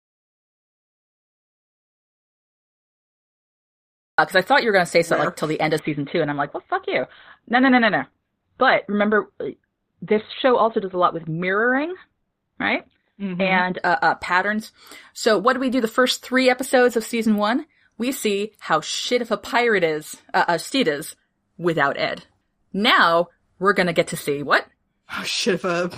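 The clip opens in dead digital silence, with no room tone at all, until about 4.18 s, when the speech arrives with "uh I thought you". That's an audio dropout to silence, likely an input that was cut off or muted while the recorder kept writing silence.

Then, from 5.79 s to 13.79 s, between "till the end of" and "uh uh patterns", the stream drops to a lower bitrate. Nothing above 4.2 kHz gets through, and the sound turns dull, which fits a sudden switch from around 64 kbit/s Opus down to about 12 kbit/s.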